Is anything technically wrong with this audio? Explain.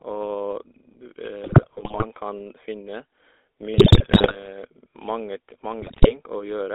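Yes. The speech has been through a GSM full-rate codec, and three stretches carry GSM bit errors.

GSM full-rate codec, throughout: The coder models the vocal tract and excites it with sparse, regularly spaced pulses, which fits the 13 kbps full-rate scheme. The result is a buzzy, gravelly roughness that is plainly audible. The band is confined to roughly 300 Hz to 3.6 kHz, so the lows and everything above 3.6 kHz are missing, giving a thin telephone timbre.

GSM bit errors, 1.44–2.05 s (ending just before "kan finne"), 3.74–4.47 s and 5.82–6.15 s: Corrupted bits in the received frames reached the decoder, so it rebuilt those frames with wrong filter, pitch or gain values. The spectrum bends and the level jumps from frame to frame, breaking the speech into squawks, pops and gargling for the length of each stretch.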